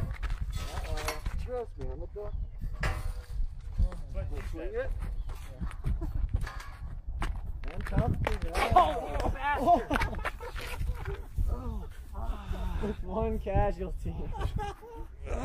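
No faults can be heard anywhere in the recording.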